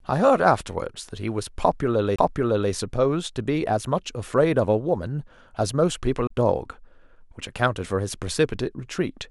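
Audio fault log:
2.16–2.18 s and 6.27–6.30 s, CD skip: the laser jumps tracks, so the speech mutes for roughly 30 ms, then resumes from another point on the disc.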